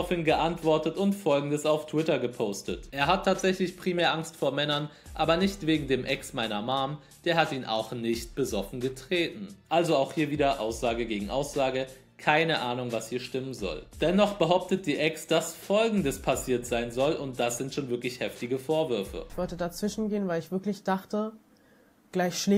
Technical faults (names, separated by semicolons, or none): none